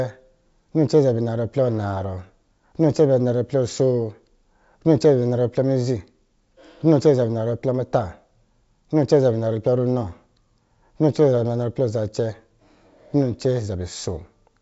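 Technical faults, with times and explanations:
No technical faults can be heard in this speech recording.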